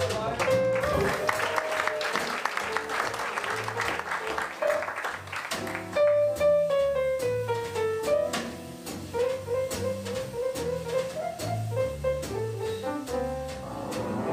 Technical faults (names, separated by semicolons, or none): overlapping chunks